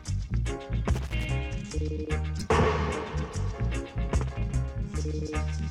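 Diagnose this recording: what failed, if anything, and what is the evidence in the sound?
Loose connector crackle from 0.94 to 1.25 s, in the analogue wiring. For about 0.3 s an irregular burst of scratchy crackle cuts through the sound as a worn or dirty contact makes and breaks. The chopping of the signal produces the crackle.

Corrupt frame decoded at 2.39 to 2.43 s, in the codec. A 40 ms stretch of misplaced energy peaks at roughly -20 dBFS, which fits a couple of damaged frames. Flipped bits gave the decoder wrong gains or codes, and it played them anyway.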